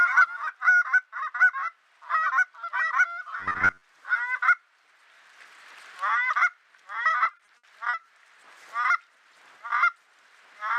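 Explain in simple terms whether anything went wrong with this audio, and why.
Two problems can be heard. From 3.40 to 3.84 s the sound turns into a stiff, metallic buzz near 94 Hz: robotic sound from repeated short buffers. New audio likely arrived too slowly, so roughly half of that stretch is a tiny slice of about 11 ms replayed again and again.

From 7.23 to 8.05 s there is repeated packet loss, which gives a choppy, robotic sound. Chunks of audio went missing one after another, and each hole, the longest about 60 ms, was patched by stretching the last sound. That adds up to about 220 ms covered over, roughly a quarter of the stretch.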